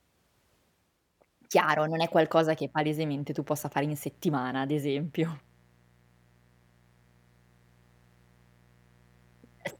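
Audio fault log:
2.59 s to 9.79 s, mains buzz: a steady, raspy buzz enters at 2.59 s and continues to the end, sitting roughly 35 dB below the speech. Its base is the 60 Hz mains frequency, but sharp switching spikes leak into the signal twice per cycle, at 120 times a second, from a dimmer, rectifier or unshielded path. Those narrow spikes carry a dense series of 60 Hz harmonics up to several kHz, giving the buzz its gritty edge rather than a pure low hum.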